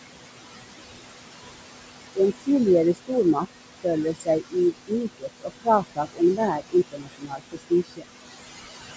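Throughout the speech, noise suppressor artifacts are present. The steady room noise, sitting about 10 dB below the voice, is pulled down by about 21 dB in the gaps and rises back underneath the talking. From 2.39 s the suppressor also cuts speech, mistaking soft passages for noise and dropping them by about 20 dB at 2.39–2.49, 2.94–3.12, 3.34–3.86, 4.04–4.56, 4.72–6.4 and 6.91–8.08 s. These moments sound swallowed and faint. The hits grow longer through the clip, reaching roughly a second of affected sound in the final span.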